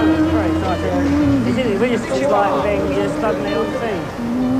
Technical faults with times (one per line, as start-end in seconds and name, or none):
2.03-2.05 skip ahead